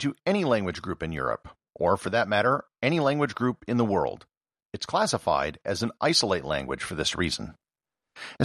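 No technical faults are audible.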